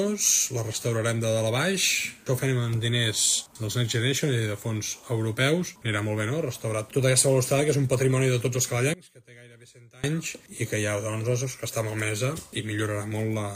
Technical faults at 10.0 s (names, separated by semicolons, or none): one channel inverted